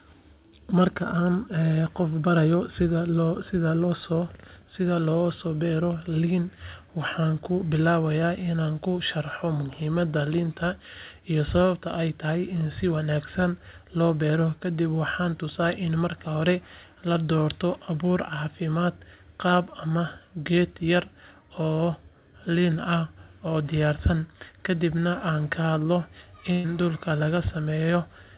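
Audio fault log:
26.52 to 26.66 s, burst of packet loss: about 120 ms of speech never arrived, so the receiver stretched the last sound for that span and faded it, giving a held buzz or fading hiss before speech resumes with that part skipped. A spectrogram shows smeared, repeating bands decaying in level; the waveform shows a repeating, shrinking pattern instead of new detail.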